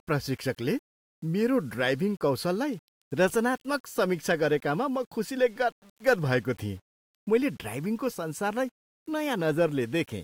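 Low bit depth without dither runs throughout the speech: a grainy, gritty distortion that tracks the voice, sitting roughly 35 dB below it, with quiet passages sputtering or dropping out. The cause is likely rounding to about 8 bits with no dither.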